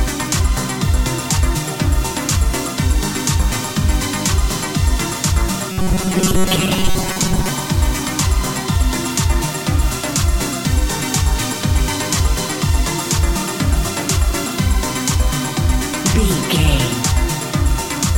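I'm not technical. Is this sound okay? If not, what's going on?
No. From 5.72 to 7.49 s there's robotic sound from repeated short buffers, a stiff metallic buzz at 188 Hz. New audio likely arrived too slowly, so the software kept replaying a tiny 5 ms snippet for most of that stretch.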